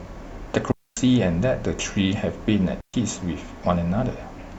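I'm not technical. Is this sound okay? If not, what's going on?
No. The speech cuts out twice, at 0.72 to 0.97 s and 2.81 to 2.94 s. That's a digital wireless dropout: the wireless link lost data, so the receiver briefly muted.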